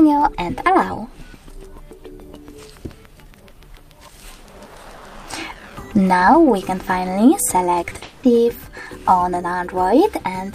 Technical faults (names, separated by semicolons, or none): short concealed packet loss; long network dropout